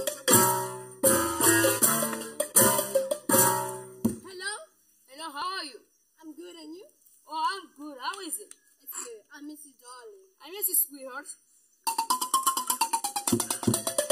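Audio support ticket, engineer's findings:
Channel delay (comb filtering), throughout. Hollow, phasey sound with fixed spectral notches. One channel lags the other by a little under a millisecond before the mono sum; the shared content cancels, first notch near 700 Hz, then repeating about every 1.4 kHz.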